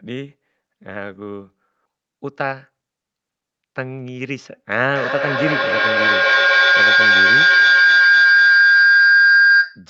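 At 1.85 s there's a skip ahead: about 0.7 s of audio got dropped while later packets were already queued, so playback jumps straight forward. The two sides are stitched together with barely any gap, and a chunk of the sentence simply vanishes.

Right after, from 2.44 to 2.86 s, you get a jitter buffer speed-up. The buffer was holding more than it wanted, so it trimmed tiny pitch-period slices, around 40 ms in total. The speech runs about 8% faster at the same pitch and sounds a touch rushed.

From 4.76 s to the end there's a feedback howl, from two devices in the same room on one call. The loop keeps gaining on each pass, repeating roughly every 200 ms, and narrows to a tone around 1.5 kHz. It peaks about 9 dB above the speech and never gets broken. Under all of this, the call path's top end stops at 8 kHz.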